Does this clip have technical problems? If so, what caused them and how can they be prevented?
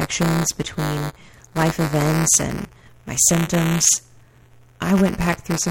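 Yes. Buffer tearing runs through the whole speech clip. A robotic buzz at 200 Hz rides on the sound and drops away in pauses. The writer and reader of the playback ring buffer have drifted into each other. Each 5 ms period now holds a small slice, around a twentieth, of audio from one lap earlier, roughly 10 ms stale. The hard joins repeat at the buffer rate. Prevent it by keeping writes safely ahead of the hardware read position and resynchronising after any underrun.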